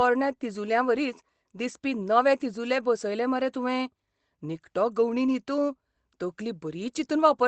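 At 2.73 to 2.75 s, a lost packet rebuilt from error correction: a brief 20 ms patch, which fits a single lost packet, replayed from the lower-bitrate copy carried in the next Opus packet. Unlike ordinary loss concealment, there's no gap or smeared, buzzy repeat, just a momentary roughening and added noise.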